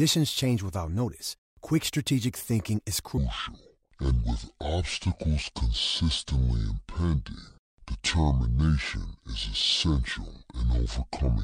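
From 3.17 s, right after "quick strategic thinking is", to the end of the clip at 11.43 s, the speech plays as a section at the wrong speed: about 0.59 times normal, so it drags and drops roughly ten semitones, sounding deep and sluggish. The likely cause is playback or editing against the wrong clock. On a spectrogram, harmonics and formants shift abruptly downward at 3.17 s. Syllables stretch wider in both the spectrogram and the waveform.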